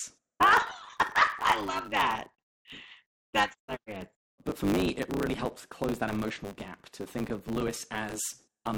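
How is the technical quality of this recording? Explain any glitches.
The recording is compromised by a block size mismatch (truncated) that runs for the whole clip. One stage passes along blocks longer than the next stage reads, which fits 512-sample blocks, and the tail of every block is discarded. Chopping the audio at that steady rate puts a 100 Hz buzz under the speech, and because material is lost each block, the talking runs about 1.16 times too fast while its timbre stays close to normal.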